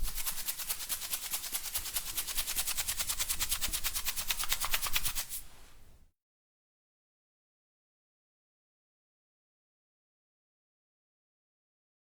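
Nothing's wrong here as far as the ear can tell: it's a recording of sounds, and no technical fault turns up anywhere in it.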